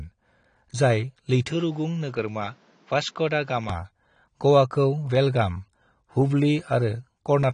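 Speech recording with plainly audible AAC compression throughout: nothing above 9.7 kHz, with dull, smeared, warbling detail, likely from AAC-LC at a low bitrate around 32 kbps. From 1.51 to 3.70 s the input likely switched to a poorer device. The band narrows to 7.6 kHz, the level drops about 5 dB, and new background noise appears, with no gap at either switch.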